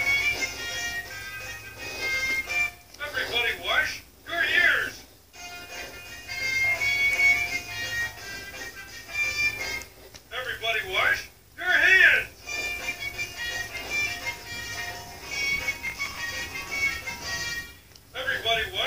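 At 15.87 s a burst of processor overload crackle begins. It lasts until 16.19 s, about a third of a second. The processor could not fill each small audio buffer in time, and many deadlines were missed in a row. The crackle points to buffers of around 5 ms, with roughly fifteen of them missed. Each miss repeats a scrap of old audio with hard edges. Together these scraps make a gritty tearing over the sound. It stops as the load eases.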